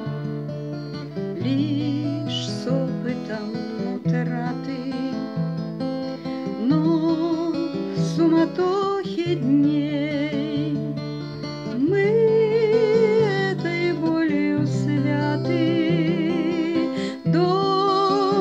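No technical faults can be heard anywhere in this audio. There is nothing to point to or place in time.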